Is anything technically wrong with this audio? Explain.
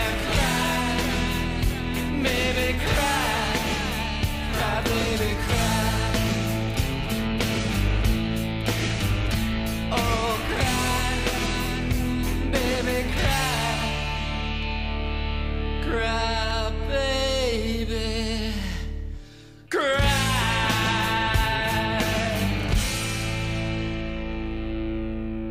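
Yes. From about 1.51 s to 24.01 s there are clock drift buffer slips: a click recurs every 1.87 s, roughly fifteen times, whenever sound is present. The likely cause is two devices on separate clocks disagreeing by something like 100 ppm, so the buffer between them fills or drains until a handful of samples is dropped or repeated. Random dropouts or packet loss would land irregularly. Here the clicks keep a strict metronome-like spacing.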